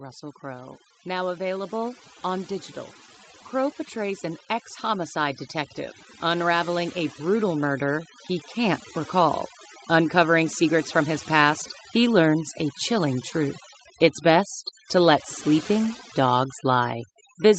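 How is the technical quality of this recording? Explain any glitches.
The recording has two faults: noise suppression set far too strong, which affects the whole clip, and two stretches where the level slowly climbs.

Overdone noise removal runs from start to finish. The suppressor cuts any frequency band near its noise estimate down or out, and soft parts of the speech go with it. The background becomes near silence with twinkling specks. Unlike simple low-pass dulling, the damage flickers band by band.

Automatic gain rising occurs from 0.4 to 2.55 s, adding about 4 dB, and again from 6.2 to 9.42 s, adding about 6 dB. The gain control judged the input too quiet and raised its gain gradually, so voice and residual background swell together over a couple of seconds. This slow ramp distinguishes it from a sudden level jump.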